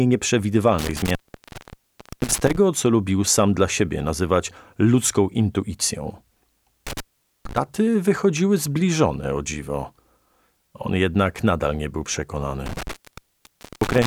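Intermittent contact strikes three times: from 0.79 to 2.57 s (open for 1.07 s), 6.87 to 7.57 s (0.45 s) and 12.66 to 14.07 s (0.90 s). A loose plug or cable breaks the circuit, so the sound drops out. Crackle at each break's edges marks it as physical, unlike a clean digital dropout.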